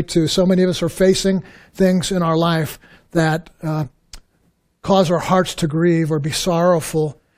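No technical faults can be heard anywhere in the speech.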